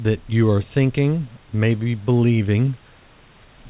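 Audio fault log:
No faults found; the audio comes through the G.711 A-law call path with nothing above 4 kHz, and the room noise sits about 34 dB below the speech.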